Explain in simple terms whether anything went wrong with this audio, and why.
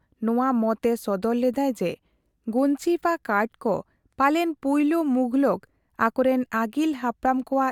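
Nothing went wrong here, as the speech comes through steadily with no glitches, dropouts or odd noises anywhere along the way.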